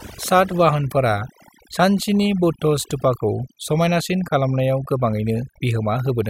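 Throughout the speech, overdone noise removal is at work: bands near the estimated noise floor are pulled almost to nothing, leaving a near-silent background with twinkling specks. Unlike a noise gate, it never pumps the whole signal open and shut.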